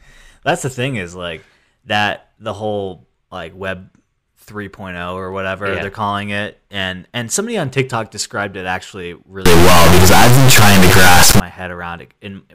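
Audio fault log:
9.45–11.40 s, integer read as float: just after "described it actually", the speech turns into a harsh, extremely loud square-wave buzz that drops out in the quietest moments, which fits 32-bit integer samples being read as 32-bit floats, so the values swing between near-zero and the clipping limit.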